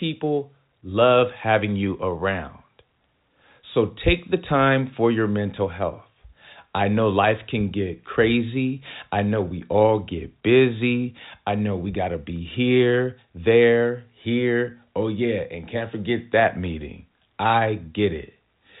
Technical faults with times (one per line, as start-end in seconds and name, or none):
none